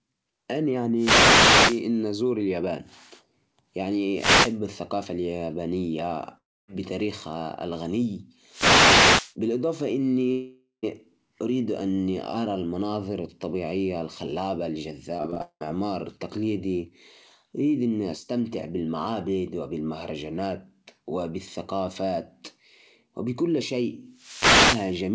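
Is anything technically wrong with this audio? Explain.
Yes, there are three kinds of trouble in this speech recording, all heard through a call path whose sound stops at about 8 kHz, which fits a G.722 codec.

Wireless microphone noise hits land at 0.95–1.83 s, 4.12–4.58 s, 8.48–9.35 s and 24.09–25.03 s. Each is a short swish of static over the voice. That's an analogue FM radio mic fading as reflected signals cancel the direct one, so the receiver's own noise rises and, in the deeper dips, breaks into clicks.

There are two long network dropouts, at 6.38–6.70 s and 10.32–10.85 s. In the first, about 0.3 s of audio is lost. The last sound smears on as a fading buzz and then goes quiet for roughly a quarter second. The second loses about 0.52 s and is smeared almost the whole way, with only a brief silence at the end. Speech resumes past the hole, with the missing bit simply gone. This is likely packets failing to arrive for a sustained stretch.

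Repeated packet loss (robotic sound) hits 15.17–15.63 s. Here the audio breaks up about six times in under half a second, and the longest hole is about 190 ms. Each gap gets patched by stretching the previous sound, and roughly 60 percent of that span is filled-in rather than real. The result is choppy speech with pieces missing.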